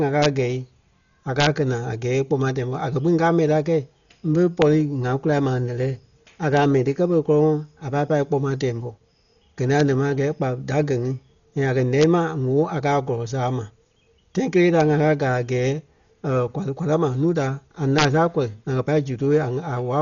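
Throughout, the speech is dull and band-limited, with nothing above 6.9 kHz and rough, fluttering noise around tones, likely heavy Dolby Digital compression at a 40 kbps rate. Integer overflow produces violent cracks at 0.22–0.26, 1.40–1.47, 4.62, 6.57 (just before "mɛni ti kɛ́ pere"), 9.80, 12.02 (between "a kɛ̀" and "ma ŋ̀óo a"), 14.80 (between "kelee ta" and "ŋa káa"), and 17.99–18.05 s. At each of these moments, peaks pushed up to about 2 dB past the integer limit wrapped to the opposite sign instead of being limited.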